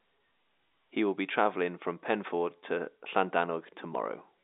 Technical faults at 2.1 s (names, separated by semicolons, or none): none